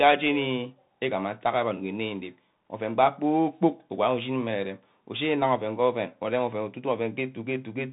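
Bluetooth CVSD headset codec throughout: speech is band-limited below 4 kHz, with one-bit slope tracking leaving scratchy s sounds, overload distortion and granular hiss, consistent with a 64 kbit/s link.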